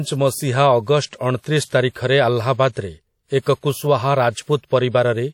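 From start to finish the speech carries a ringing, washy quality, with a hiss that swells and fades along with the voice, and nothing is heard above 18.8 kHz. The damage is plainly audible: consonants smear across tens of milliseconds and quieter detail thins out. This is likely WMA compression, where a transform codec spreads its quantisation noise over long blocks and drops weak components, which fits a bitrate of around 48 kbps.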